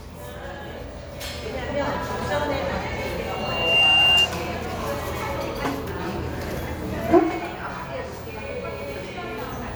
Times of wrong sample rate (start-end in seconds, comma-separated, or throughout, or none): none